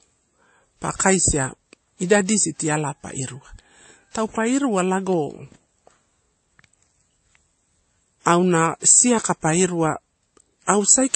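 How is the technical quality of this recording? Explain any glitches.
The recording's quality is degraded throughout the speech by stacked compression, with a dull character from start to finish.

From the first second to the last, the audio shows transcoding between lossy codecs. It was likely encoded first as a low-rate MP3, around 32 kbit/s by its sound, and then re-encoded with WMA 1 at about 64 kbit/s. The second encoder spent its bits reproducing the first one's damage while adding its own, so two kinds of artefact sit on top of each other. Nothing remains above 8.3 kHz, which is the lower cut-off in the chain. On a spectrogram this appears as a hard, flat ceiling at 8.3 kHz with patchy, blocky energy just beneath it. The waveform itself looks ordinary.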